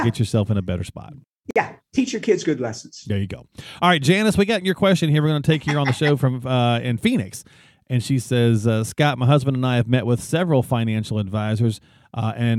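At 1.51 s, right after "in a better spot", the speech drops into a brief gap of about 51 ms, with softened edges, and then resumes with "teach your kids good" at 1.56 s. This is a gap at a join of encoded pieces: two separately encoded segments were butted together without trimming, so the encoder's start-up delay and the padded final frame both survive as dead air in the middle of continuous speech.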